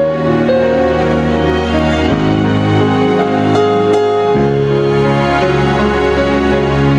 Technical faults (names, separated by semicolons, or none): gain pumping